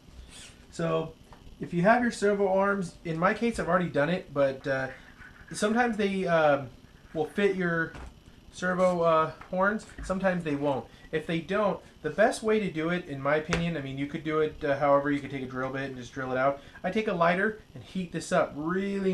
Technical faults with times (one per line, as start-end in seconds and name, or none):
none